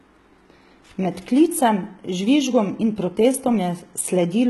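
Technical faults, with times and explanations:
Throughout: HE-AAC compression. The upper band sounds synthesized rather than captured, with s sounds gritty and lispy and nothing above 11.8 kHz. Heavy damage of this kind fits a bitrate near 16 kbps, likely from spectral band replication rebuilding treble from copied lower bands.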